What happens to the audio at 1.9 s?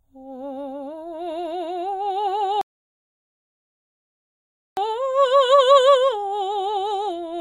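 At 1.9 s the music plays through cleanly, with no dropout, click, distortion or other technical fault at that moment.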